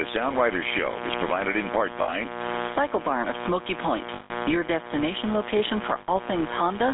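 A raspy 60 Hz mains buzz, only about 10 dB below the speech, runs throughout. Its sharp harmonics climb well into the kilohertz range, unlike the smooth, low hum of plain ground-loop pickup. Gain pumping is also constant: loud and soft parts are squashed closer together in level, most likely because the input gain is set far too high with a fast limiter behind it. A GSM full-rate codec confines everything to roughly 250 Hz to 3.6 kHz. Its gravelly, buzzy texture comes from coarse pulse excitation, which fits a 13 kbps full-rate link rather than ordinary band-limiting. Lost GSM frames appear three times: 2.02 to 2.15 s, after "is provided in part"; 4.14 to 4.32 s, before "your destination location"; and 6.00 to 6.09 s, after "your destination location". Each freezes into a rough, metallic ring rather than cutting to silence, which sets these apart from plain dropouts. The longest lasts about 160 ms.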